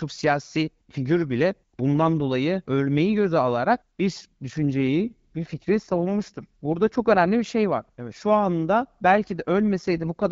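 From 4.45 to 7.25 s, just before "bir şey var", and again from 9.73 s to the end, the speech turns rougher and more synthetic with no gap or narrowing. These are AMR rate drops, the wideband codec stepping down from what sounds like 12.65 to about 8.85 kbit/s.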